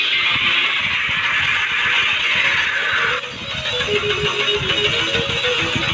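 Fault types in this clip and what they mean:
skip ahead: At 1.32 s the sound jumps forward with no gap, about a second of audio dropped and the two sides joined directly.
jitter buffer speed-up: From 1.41 to 4.01 s the sound runs about 13% fast at unchanged pitch, as the buffer trims short pitch-period pieces to shed roughly 300 ms of delay.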